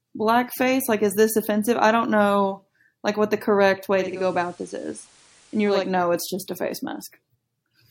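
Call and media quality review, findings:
Digital radio blending to analogue, 3.9 to 5.98 s. Speech drops to the FM analogue feed after "like what the correct", returns before "it's just a face". Cross-fade about 0.35 s. Hiss rises, roughly 30 dB under speech. Level about 3 dB lower. Component: hybrid receiver losing digital lock.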